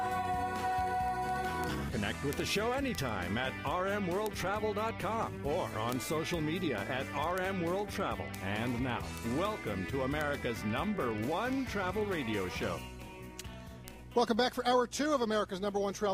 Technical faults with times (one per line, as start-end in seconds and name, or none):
0.12-16.09 word clock ticks